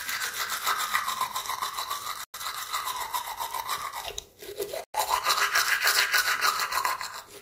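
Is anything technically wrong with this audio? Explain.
Yes, there's a gap between chunks. The sound drops into hard-edged silence from 2.24 to 2.34 s and again from 4.84 to 4.94 s, each about 100 ms, spaced 2.6 s apart. That fits 2.5 s chunks with silence slipped in at each join, so nothing is lost, just interrupted.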